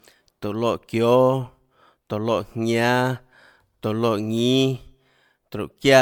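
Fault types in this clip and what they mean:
Generation loss: the speech sounds swirly and hollow throughout, with a watery smear over the whole clip and consonant attacks blurred soft, more degraded than a single pass at a bitrate in the region of 96 kbit/s MP3 would leave it. This is likely the result of repeated lossy coding, around four rounds of decoding and re-encoding, each requantising on a shifted frame grid so noise and spectral gaps pile up, with nothing above 20 kHz.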